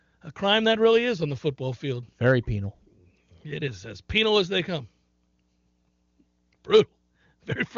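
Nothing goes wrong here: it's speech carried over the AMR wideband (HD Voice) codec, with the top end stopping at about 7.3 kHz and hardly a trace of the coding itself, which fits AMR-WB running at its top rate of 23.85 kbit/s.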